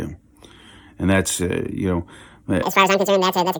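From 2.63 s to the end at 3.59 s there's a section at the wrong speed: the speech runs twice as fast and jumps roughly ten semitones up, likely from being played against the wrong clock.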